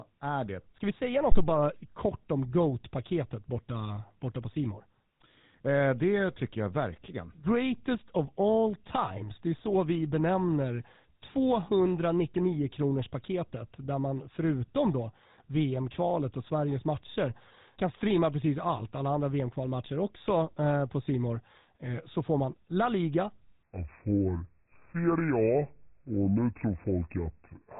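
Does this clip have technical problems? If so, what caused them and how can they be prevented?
Yes. The whole clip went through a GSM full-rate codec, which models the vocal tract and drives it with a sparse pulse excitation at about 13 kbps. That gives the speech a buzzy, gravelly roughness, with nothing above 4 kHz. To prevent it, record or route the audio over a wideband path rather than a GSM phone link.

From 1.32 to 1.46 s, between "vi säga" and "bara kort om", there is a phantom power thump. A supply switched on a live input sent a voltage step through the coupling capacitors, producing a deep thump that dies away in about 32 ms. To prevent it, mute the channel before switching phantom power.

From 23.63 s to the end, the section is at the wrong speed. It plays at 0.70 times its original rate, so the speech turns slow and deep, roughly seven semitones low. The likely cause is playback or editing against the wrong clock. 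To prevent it, match sample rates and clock settings across every device and edit.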